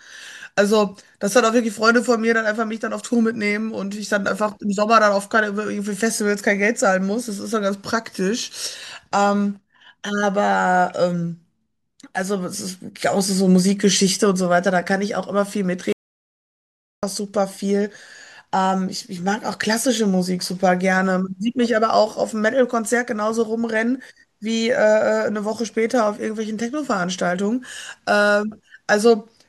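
At 15.93 s the speech cuts off mid-flow and drops to total silence until 17.03 s. This is an audio dropout to silence, lasting about 1.1 s. No room tone remains in the gap. The input was likely lost while silence kept being written.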